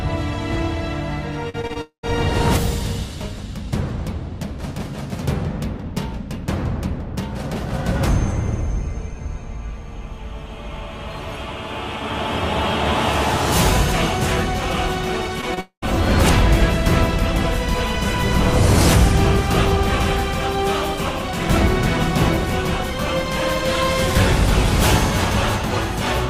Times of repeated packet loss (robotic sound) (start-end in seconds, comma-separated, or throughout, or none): 1.49-1.77